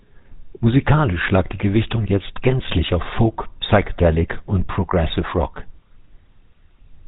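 From start to finish the speech has passed through a GSM full-rate codec, which rebuilds the voice from a vocal-tract model fed by sparse, regularly spaced pulses and cuts everything above 4 kHz. The result is a plainly audible buzzy, gravelly roughness and a dull, band-limited tone, consistent with a 13 kbps stream.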